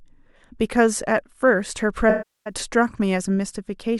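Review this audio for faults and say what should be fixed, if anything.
AAC frame loss with concealment, 2.09 to 2.53 s: about 360 ms of this speech drops out of the coded stream, which fits a run of roughly 17 consecutive AAC frames. The decoder bridges the gap by reusing the last good spectrum with altered phase, so the sound smears briefly, then decays toward silence as concealment gives up, and fades back in when valid frames return. To prevent it, protect the stream with retransmission or forward error correction, and use a deeper jitter buffer.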